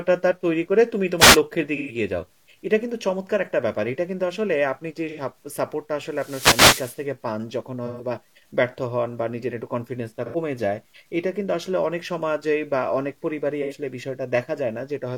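Throughout the speech, the signal was likely reduced to about 10 bits by plain truncation without dither. The rounding error tracks the voice at roughly 45 dB below it, so quieter passages and decays turn grainy and gritty, with a distortion that shifts as the sound changes.

At 1.18 to 1.38 s, the analogue wireless microphone link fades as its radio signal dips and receiver noise rises through the voice. This wireless microphone noise hit sounds like a short swish of static, and it returns far longer at 6.10 to 7.07 s as a sustained hiss burst.

From 1.76 to 1.95 s, AAC frames are lost and the decoder conceals the gap by reusing and scrambling the last good spectrum for about 128 ms. This AAC frame loss with concealment sounds like a smeared, phasey, noisy patch in the speech. The same happens at 5.09 to 5.20 s for about 85 ms, at 7.86 to 8.06 s for about 128 ms, at 10.25 to 10.36 s for about 85 ms, and at 13.62 to 13.73 s for about 85 ms.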